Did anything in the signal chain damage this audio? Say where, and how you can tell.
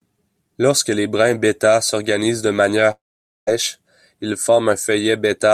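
Yes, at the network stage. At 2.91 s the speech breaks off into a fading buzz, then about 0.49 s of near-silence until 3.49 s, resuming with roughly 0.56 s missing. This is likely a long network dropout, with concealment extending the last sound before giving up.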